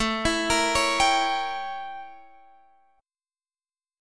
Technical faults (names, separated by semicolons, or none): none